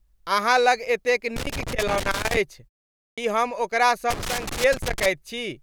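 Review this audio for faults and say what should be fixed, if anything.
Loose connector crackle, 1.36 to 2.37 s just after "अहाँ लग एतेक" and 4.10 to 5.06 s following "हम ओकरा": a worn or dirty contact keeps making and breaking, chopping the signal into roughly one-second bursts of irregular scratching. Clean or replace the cable and connector, and secure it so it cannot move during recording.

Clipped start after a pause, 3.14 to 3.18 s: after a 0.53 s gap, the output device had dropped into sleep and needed time to wake and lock again, so about 36 ms of onset is swallowed and "हम ओकरा" begins abruptly out of silence. Disable the device's power-saving idle mode, or keep a low-level signal running through pauses so it never sleeps.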